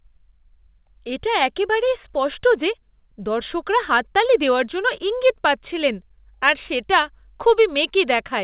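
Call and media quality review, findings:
No faults found: the speech carries the narrowband character of a normal call path, with nothing above 4 kHz and the usual coding noise that fits G.711 mu-law at 64 kbps.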